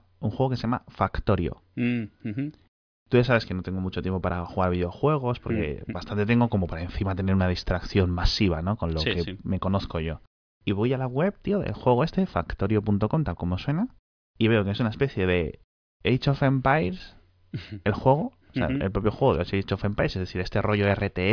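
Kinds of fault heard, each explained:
No technical faults are audible.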